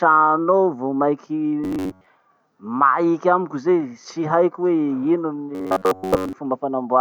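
At 1.64 s the speech turns into a rigid, metallic buzz, lasting until 2.07 s. It returns from 5.55 s to 6.34 s. Both passages are robotic sound from repeated short buffers. The buzz sits at a fixed 93.8 Hz. That fits a slice of about 10.7 ms being replayed over and over. Most of the audio in these spans is repeats. The likely cause is new audio arriving too slowly, so old slices fill the gap.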